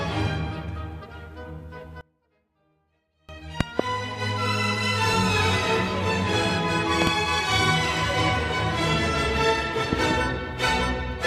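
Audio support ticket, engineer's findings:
2.01–3.29 s: level collapses by about 28 dB, leaving a faint residue. Likely one channel inverted, so the shared content cancels when the channels are summed to mono. Spectrogram shows the band emptying. Waveform shows a near-flat stretch.

Loud pop, double, at 3.61–3.82 s, 7.02–7.09 s and 9.93–10.13 s. Sharp paired clicks sit well above the sound, roughly 20 dB on the first two and somewhat less on the last, and the sound continues underneath. Likely voltage spikes from a switch, static or driver glitch. Waveform shows twin spikes. Spectrogram shows full-band vertical lines.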